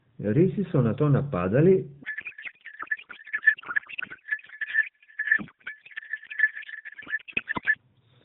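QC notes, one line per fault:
2.04–7.78 s, codec payload misread: right after "so nato napadali" the speech dissolves into garbled noise and a swirling warble that barely tracks it, until the end of the fault at 7.78 s. Octet-aligned AMR frames are being unpacked as if bandwidth-efficient, so every field is read from shifted bit positions and the AMR narrowband decoder synthesises nonsense parameters, still band-limited below 4 kHz.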